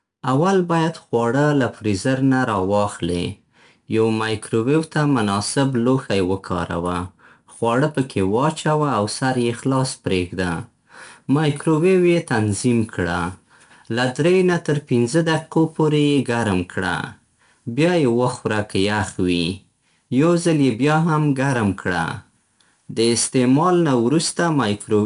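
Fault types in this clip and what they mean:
4-bit ADPCM compression: throughout, each sample is coded as a coarse adaptive step from a prediction, leaving plainly audible gritty hiss riding the speech, with nothing above 10.6 kHz.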